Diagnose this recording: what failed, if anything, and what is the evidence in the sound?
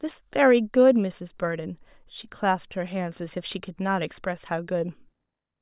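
Nothing in the signal chain seems to have failed here; the speech comes across with no audible problems anywhere along the way.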